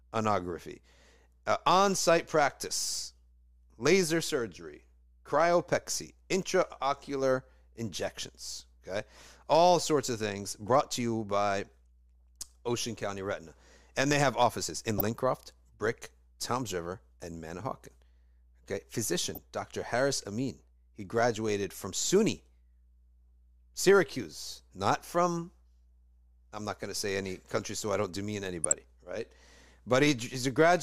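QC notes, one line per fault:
Throughout: mains hum. A steady 60 Hz tone sits about 30 dB below the speech. Power-line interference, likely from a ground loop, leaks into the signal.
14.90–15.07 s, 19.35–19.42 s, 28.64–28.73 s: DAB burbling. Brief bursts of noise cut across the speech. Uncorrected bit errors from weak reception put short blips of noise in single sub-bands.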